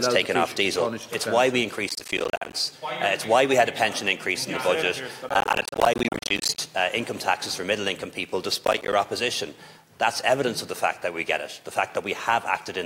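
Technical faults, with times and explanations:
1.89–2.53 s, 5.29–6.58 s and 8.65–8.93 s, processor overload crackle: bursts of gritty, tearing crackle, the middle one longest, built from many tiny hard-edged dropouts to silence that fit buffers of around 10 ms. The processor kept missing its deadlines, leaving empty buffers until the load passed.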